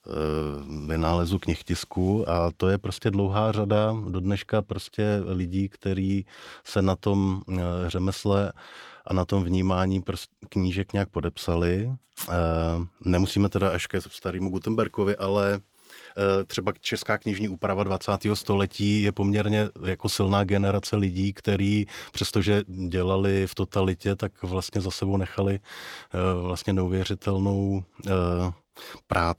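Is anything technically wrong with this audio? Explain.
No, the signal shows no technical faults at any point in this speech recording.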